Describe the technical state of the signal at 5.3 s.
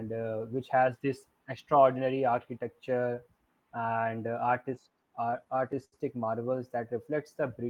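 At 5.3 s the speech is inside a run of repeated stalls (stutter) from 4.49 to 5.94 s. The jitter buffer kept running dry, so eleven brief holds, the longest 74 ms, stretch the last sound. Unlike dropouts, nothing is lost; the speech just drags and stutters.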